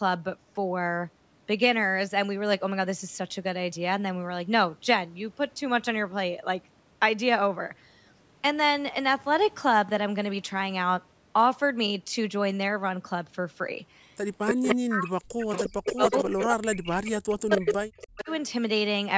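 From 14.46 to 14.74 s, an echo leak: a copy of the speech returns 287 ms late at about the same level as the original, likely because a loudspeaker echo canceller passed it through. A fixed delay and a separate copy set it apart from room reverberation.

From 14.73 to 18.28 s comes speech suppressed in double talk. Across about three seconds the near speech dips, at its deepest by around 40 dB, while the far side talks. The likely cause is the canceller ducking everything it cannot separate. Unlike dropouts, the losses follow the overlap.

During and just after that stretch the echo leak returns with the same 287 ms delay: at 15.52 to 16.46 s about 5 dB below the speech, at 17.50 to 17.75 s about as loud, and at 18.01 to 18.37 s about 15 dB down.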